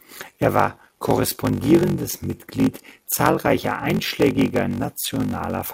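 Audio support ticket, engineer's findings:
Block size mismatch (padded), whole clip. Upstream stage writes short blocks into a larger read, which fits a 1024-sample read, and pads the remainder with zeros. Symptom: steady 46.9 Hz buzz from the silent gap in every block. Speech runs slow at 0.861x but at about normal pitch. Probable component: buffer handoff between capture and processing stages.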